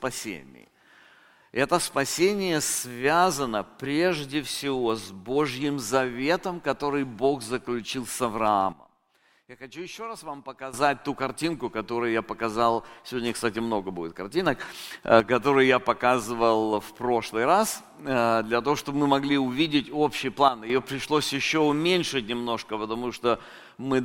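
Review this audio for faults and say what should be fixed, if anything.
Sudden gain jumps at 8.73–10.74 s (about −13 dB), 14.46–15.2 s (about +6 dB) and 20.48–20.7 s (about −10 dB). In each, the sound and the background noise step together instantly rather than easing the way a compressor does. This is likely a gain change applied without a ramp. To prevent it, ramp every gain change over a few milliseconds.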